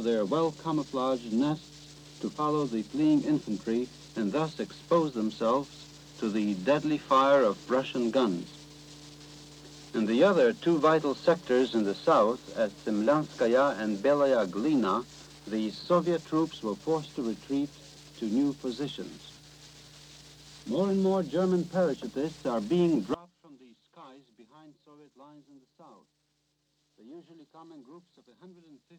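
From 23.14 s to the end at 28.98 s the sound drops by about 25 dB to a faint remnant. The likely cause is one channel inverted: one stereo side flipped polarity, so whatever both sides share cancels when they're summed to mono.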